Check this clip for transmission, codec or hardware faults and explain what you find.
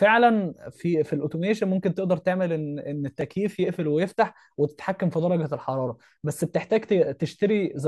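Two repeated buffer faults occur in the speech, at 1.11 s and 3.21 s. Each time a 1.33 ms fragment, which fits a 64-sample buffer, plays three extra times because fresh audio arrived late. The repeats are so short that they sound like a click or brief buzz rather than a stutter.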